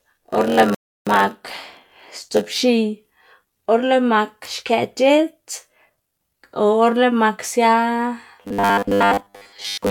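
From the start to 2.60 s, a block size mismatch (padded) puts a short run of zeros into every block. This produces a steady buzz at about 91.9 Hz and slows the speech to 0.919 times its normal speed. Unlike the later robotic effect, the voice keeps its timbre and nothing is skipped.

Inside that stretch, a rebuffering stall from 0.75 s to 1.07 s cuts the sound to silence for 322 ms. The speech then resumes exactly where it stopped. Unlike a dropout, nothing is lost and only time is added.

From 8.43 s to 9.91 s the voice turns into a rigid, metallic buzz fixed at 100 Hz that still loosely follows the speech. This is robotic sound from repeated short buffers, likely caused by the last 10 ms being looped while most of the real audio is skipped. Here a buzz is imposed rather than the speed being reduced.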